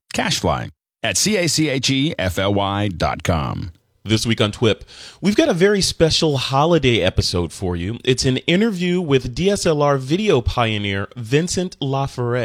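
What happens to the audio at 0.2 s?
Nothing goes wrong at 0.2 s; the speech is intact and plays through cleanly at that point.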